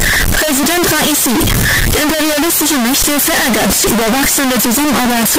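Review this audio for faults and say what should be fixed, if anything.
From start to finish the sound is very loud, harsh distortion, and quiet stretches come out as loud as everything else. The likely cause is signed and unsigned mixed up in 16-bit samples: flipping the top bit sends every zero crossing leaping across the full range. A waveform shows a solid block pinned near its peak level, snapping between extremes, and a spectrogram shows dense broadband energy throughout. To prevent it, declare and check the sample format explicitly wherever audio is read or written.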